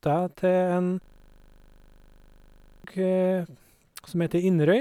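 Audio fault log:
1.04–2.84 s system hang loop: a frozen driver left one 40 ms buffer replaying 45 times, a 25 Hz buzz covering about two seconds of speech.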